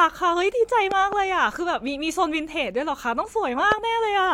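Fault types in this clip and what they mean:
Loud pop: a sudden voltage spike added to the signal, likely from a plug or static. Two quick pops near 0.9 s, another near 3.7 s.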